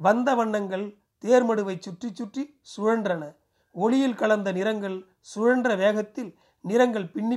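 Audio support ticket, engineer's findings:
No faults found in the speech recording. No working path is listed, so there is nothing further to note.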